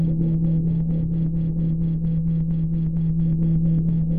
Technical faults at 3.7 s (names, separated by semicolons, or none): none